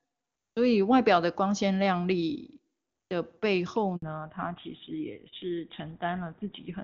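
At 3.96 s a 60 ms handover gap silences the speech while the call switches networks. Unlike a packet dropout, the audio resumes with a changed sound. From 4.02 s a fallback to narrowband removes everything above 4 kHz. The clear wideband speech turns dull and boxy, and it stays that way rather than recovering.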